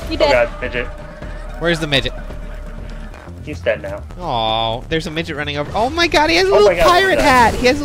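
No technical faults can be heard anywhere in the audio.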